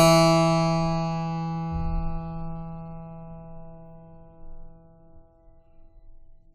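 No technical faults can be heard anywhere in this music recording, and the signal holds steady throughout.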